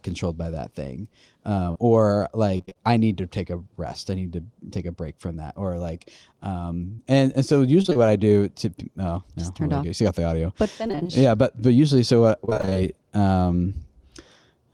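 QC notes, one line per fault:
1.71–1.77 s and 6.95–7.00 s: short concealed packet loss. About 40 ms never arrived and was filled by extending the preceding sound, heard as a brief smear. Spectrogram shows smoothed, repeated harmonics.
2.57–2.77 s, 7.82–7.97 s, 10.87–11.11 s and 12.45–12.77 s: repeated packet loss (robotic sound). Gaps of about 20 ms recur, and roughly half of each span is patched, giving choppy sound. Waveform shows periodic repeated cycles.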